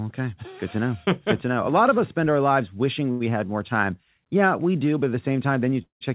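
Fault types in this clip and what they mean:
Short stall from a late packet: A packet reached the receiver after its playout time, so the jitter buffer ran dry and the last bit of speech was stretched for about 89 ms until the packet came in. Playback then resumed from the same point with nothing lost. Between 3.11 and 3.31 s, right after "spend our lives wishing" and before "more time", a sound is held unnaturally long with a faint buzz or dip, delaying what follows.
Call audio freeze: Packets were likely held up in transit and the jitter buffer emptied. The receiver kept extending the last sound for roughly 189 ms, first as a fading buzz or hiss and then as about 120 ms of silence. Once the packets arrived, playback picked up where it had stopped, so a gap was inserted without dropping any speech. This runs from 5.82 to 6.04 s, in the narrowband sound of a telephone codec with nothing above 4 kHz.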